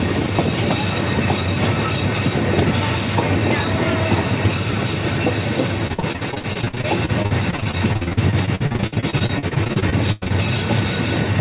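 From 5.87 to 10.32 s, repeated packet loss gives a robotic sound. Dozens of short holes, none over 97 ms, are patched by stretching the preceding sound, concealing nearly a third of the span. The waveform shows stuttering, repeated cycles. The spectrogram, empty above 4 kHz, shows smeared horizontal bands.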